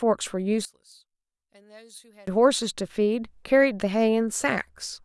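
A speech clip where, from 0.65 to 2.27 s, the centred voice collapses by about 28 dB to a faint residue, likely one channel inverted cancelling against the other in mono.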